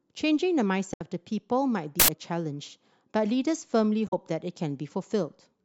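A speech recording with two kinds of fault. Damaged data in a compressed stream appears at 0.90 to 1.01 s and again at 4.05 to 4.13 s: corrupted bytes make the decoder misread frames, lose sync and hunt for the next valid header, leaving a brief disruption each time. An uninitialised buffer plays at 2.00 to 2.08 s, an 85 ms burst of loud digital noise where stale memory was output as samples before real audio was written, which fits a 4096-sample buffer.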